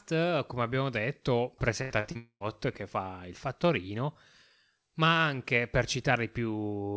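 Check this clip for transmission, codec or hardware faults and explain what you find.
Four packet-loss faults cluster between about 1.8 and 2.4 s of this speech, all on a call path whose bandwidth stops at 8 kHz, consistent with G.722.

Burst of packet loss, 1.82 to 1.92 s, just after "come abbiamo detto": about 80 ms went missing. The receiver extended the last sound and faded it down before speech resumes further on.

Short concealed packet loss, 2.00 to 2.05 s and 2.11 to 2.17 s: each gap of roughly 40 ms was patched by extrapolating the preceding audio, heard as a brief smear or wobble.

Long network dropout, 2.17 to 2.42 s, just before "che fa il fattorino": a fading continuation of the last sound carries on through the gap, then there is about 80 ms of silence before speech returns with about 240 ms of material gone. The likely cause is an extended interruption in packet arrival, with the receiver concealing what it could before falling silent.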